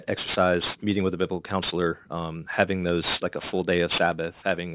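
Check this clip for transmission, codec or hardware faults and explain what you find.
The speech has a gritty, metallic edge on its sibilants and breathy sounds from start to finish. That roughness is aliasing. The content stops hard at about 4 kHz, and energy that belonged above that point has folded back down to wrong, unrelated frequencies. That fits a drop to an 8 kHz sample rate from 48 kHz with no anti-aliasing filter first. The folded energy is strong, only around 10 dB below the speech itself.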